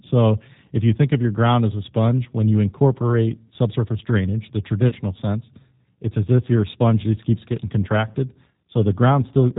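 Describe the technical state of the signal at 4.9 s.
At 4.9 s the signal is in a dropout handled by VoIP packet loss concealment, running from about 4.88 to 4.96 s, between "incorporate subsurface drainage the" and "sense it's as if". Roughly 40 ms of audio went missing, which fits two lost packets. The decoder filled the gap by repeating its last pitch and filter state at falling gain, so the sound smears into a fading buzzy tone or coloured noise. Because each frame builds on the one before, the sound stays weak and distorted briefly after the gap ends.

Underneath this, the whole clip carries plainly audible G.729 codec damage, with a character that points to the 8 kbit/s G.729A variant. Nothing above 4 kHz survives, and the sound is rebuilt from a vocal tract filter plus sparse pulses, which gives it a rough, slightly synthetic texture.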